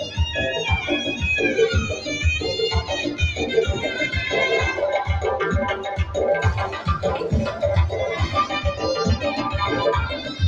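Right at the tail, from 10.14 to 10.37 s, there's sound cut by the noise suppressor. The suppressor misjudged what was coming through as background noise and pulled it down harder than everything around it, by about 6 dB at the deepest point. You hear it as a brief sag in level lasting about a fifth of a second, as if the sound were ducked for a moment before it comes back up.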